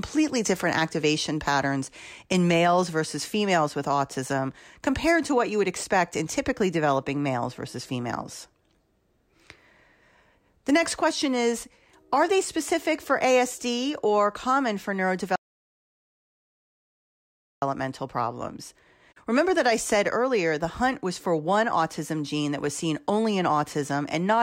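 An audio dropout to silence runs from 15.36 to 17.62 s, right after "or common for". The speech stops mid-flow and about 2.26 s of total silence follows, with no room tone at all, before the sound returns just as abruptly. The likely cause is a lost input, such as a disconnected device, a failed link or an accidental mute, while the recorder kept writing silence. Whatever was spoken in that stretch is gone.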